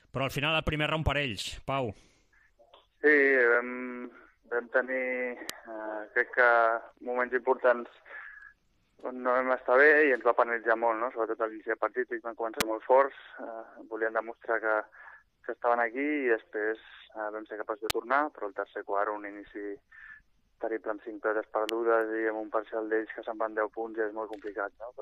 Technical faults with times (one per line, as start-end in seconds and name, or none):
5.50 electrical switching spike
12.60 electrical switching spike
17.90 electrical switching spike
21.69 electrical switching spike